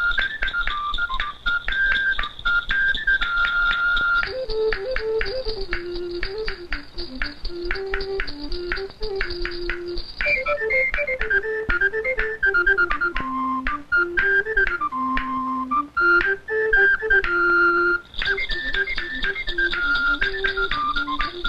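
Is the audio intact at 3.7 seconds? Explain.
Yes, the audio at 3.7 seconds is intact, with no dropout, click, distortion or other fault at that point.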